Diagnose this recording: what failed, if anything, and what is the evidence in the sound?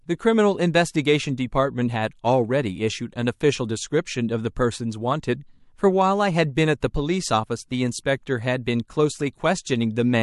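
Codec pre-echo at 6.55, 6.80 and 8.64–8.66 s: hissy spectrogram haze about 11–16 dB up, 15–20 ms before attacks, as long blocks spread quantisation noise.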